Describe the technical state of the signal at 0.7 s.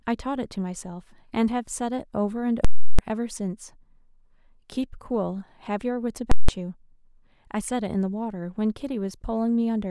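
At 0.7 s the speech signal is intact, with no audible fault at that moment.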